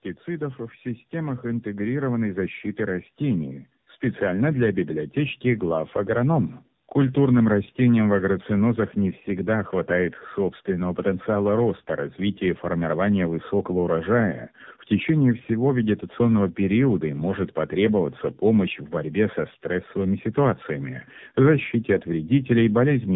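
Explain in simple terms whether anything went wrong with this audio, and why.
Something did go wrong, and it lasts the whole clip. The fault is tandem speech coding. The call passed through two mobile phone speech coders, one after another, with a plain telephone link between them. Each coder squeezed the speech and threw details away. The second coder then worked on the already damaged result. So the losses stacked up. The speech sounds rough, muffled and warbly. Nothing is left above about 3.8 kHz, which takes away the crisp edges of sounds.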